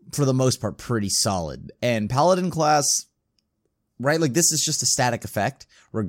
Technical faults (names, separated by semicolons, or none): none